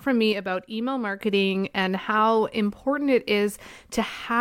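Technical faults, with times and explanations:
0.32 to 1.19 s, one channel drops out: the speech suddenly sinks about 6 dB, likely because one stereo side vanished before the mono sum, recovering just before "and how important it".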